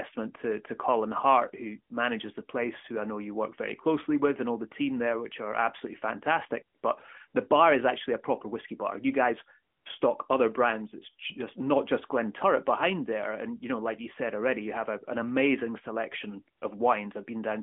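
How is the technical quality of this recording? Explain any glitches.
The recording has the narrow, phone-line sound of a mobile call, with the band running from about 250 Hz to 3.4 kHz and only light codec colouring, which fits AMR-NB at its 12.2 kbps mode. Four short glitches are audible in the pauses.

AMR comfort noise: at 6.78 to 6.84 s, just after "which are absolutely fantastic"; at 7.28 to 7.34 s; at 9.74 to 9.86 s, just before "stock other brands"; and at 16.58 to 16.62 s, after "a an amazing selection". Each gap lasts 40 to 120 ms. In these gaps the real room background drops out and a smooth, even hiss takes its place, then switches back. During those moments the handset treated the talker as silent and stopped sending speech frames. The receiving end filled each gap with synthetic noise built from a rough estimate of the background's level and spectral shape.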